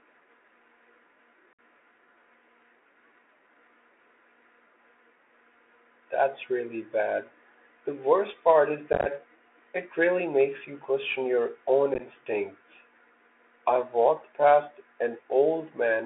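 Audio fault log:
Throughout, Bluetooth CVSD headset codec: the speech arrives through the narrowband headset codec, which fits a 64 kbps CVSD link. It encodes each sample as a single up-or-down step whose size adapts. Here the band sits between about 300 Hz and 3.5 kHz, so the top end is missing. Fast, loud high-frequency energy outruns the step, and s sounds turn scratchy. A grainy hiss sits under the voice, and the codec damage is plainly audible.
1.53–1.59 s, 8.93–9.07 s and 11.94–12.01 s, unconcealed Bluetooth headset packet loss: short voice packets between headset and phone were dropped. Nothing was patched in to fill the gaps, so the speech cuts to silence or an idle pattern with abrupt edges. The first loss is one solid hole of about 56 ms, roughly fifteen packets. The second is about 83 ms of loss scattered over 128 ms, with runs of up to 15 ms, and it sounds chopped and crackly. 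The third is about 34 ms scattered over 60 ms, with runs of up to 11 ms.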